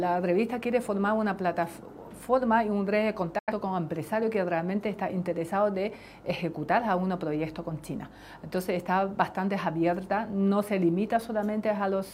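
At 3.38 s the sound fades out in about 8 ms and stays silent until 3.52 s. This is a digital broadcast dropout. The receiver muted on bad or missing frames. About 85 ms of programme is lost, which fits two dropped frames.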